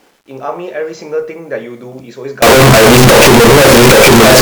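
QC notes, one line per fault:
2.42 to 4.42 s, signed and unsigned mixed up: from 2.42 s to the end the speech turns into a wall of harsh, buzzing distortion, and the quiet bits are as loud as the loud ones. That's likely the 8-bit samples being read with the wrong sign convention, so the top bit flips and every zero crossing swings across the full range.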